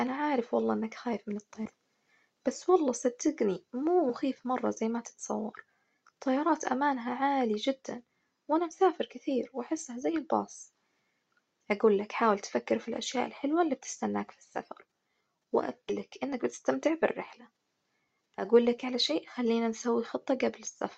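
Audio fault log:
1.65–1.70 s, 4.09 s, 15.89–15.94 s: compressed frames skipped. Whole chunks of sound vanish, about 0.4 s, under 0.1 s, then about 0.2 s. The jumps fit 20 ms frames.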